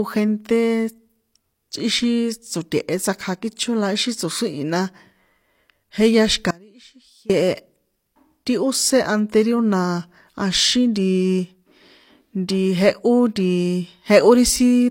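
Throughout the speech, the sound carries the smeared, swirly texture of heavy compression, with nothing above 16.3 kHz. This is likely low-bitrate audio saved at a high bitrate. The damage fits a low-rate HE-AAC source later re-encoded as high-rate MP3. On a spectrogram, a hard, flat ceiling cuts across the whole clip.

From 6.51 to 7.30 s, right after "jehya xi̱ka", the speech drops out for about 0.79 s, leaving only a faint residue roughly 25 dB below normal. This is an audio dropout, likely a brief signal loss while the path stayed live. The waveform collapses abruptly to a thin sliver, with no fade.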